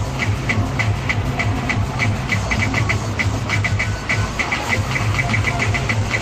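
Nothing in the audio stood out as a technical problem on listening.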